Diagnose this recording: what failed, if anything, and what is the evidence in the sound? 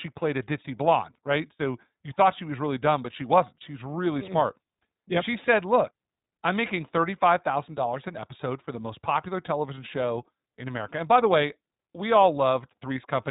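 iLBC codec damage runs throughout, at the codec stage. Nothing above 3.8 kHz survives, and the speech has a plainly rough, synthetic edge. Each 20 ms frame's excitation is coded independently at a low rate, consistent with iLBC's 15.2 kbps mode.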